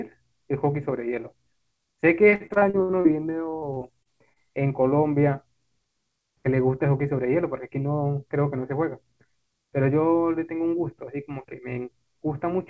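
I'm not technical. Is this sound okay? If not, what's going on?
No, there are two problems. From 2.30 to 3.07 s, and again from 3.49 to 4.50 s, there is repeated packet loss (robotic sound). Bits of the call went missing over and over, and the gaps were patched by stretching the last sound. That gives choppy speech with pieces gone, worst in the first stretch. Unlike a single dropout, it keeps breaking up.

From 8.57 to 9.33 s there is a jitter buffer speed-up. Audio had piled up in the receiver, so it trimmed tiny slices, a few hundredths of a second in all, to catch up. Speech runs slightly faster, about 4%, but the pitch stays the same. That sets it apart from a chipmunk-style speed change.

The call line carries nothing above 8 kHz.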